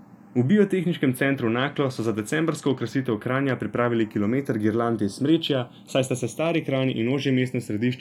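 A speech recording with channels drifting apart for the whole of its 8 seconds. The left and right sides appear to come from devices on separate clocks. So the offset between them is not fixed but creeps steadily. By the end it reaches roughly 0.4 ms. That rate fits clocks that disagree by around 70 parts per million. Summed to mono, the two copies cancel at certain frequencies. Those notches glide slowly through the spectrum, giving a slow, sweeping flange.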